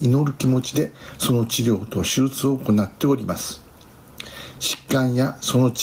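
Gain pumping runs throughout: the gain swings by roughly 10 dB, likely from excess gain driving a fast limiter.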